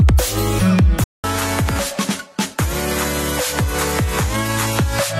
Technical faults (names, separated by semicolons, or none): input switched to a poorer device